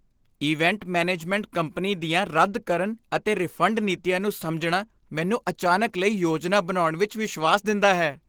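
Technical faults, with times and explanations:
throughout, Opus compression: the speech is plainly hoarse and grainy, with a rough, noisy sheen on the highs, though content reaches 20.2 kHz. This likely comes from Opus in hybrid mode at a rate that fits 16 kbps. A speech coder handles the lows and the upper bands are filled coarsely.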